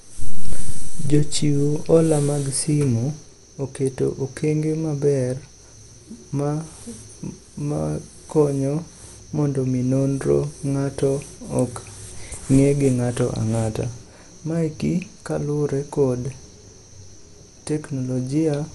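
Dolby Digital compression runs throughout the speech: nothing sounds above 11.5 kHz, leaving it dull, with rough, fluttering noise around tonal parts. The likely cause is a starved AC-3 encoder, consistent with 64 kbps, narrowing the band and leaving frequency lines without bits, which the decoder fills with dither noise.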